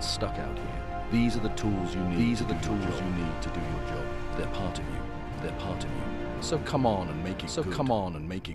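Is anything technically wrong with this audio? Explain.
Yes. Throughout the clip there is a doubled audio track: the same sound is mixed in twice, most likely because it was captured a second time through a slower path that trails the first by about a second. The late copy arrives at roughly the same level as the original and covers the full frequency range, so everything is heard twice in succession, with no decay or room colour, as a dry, flat repeat.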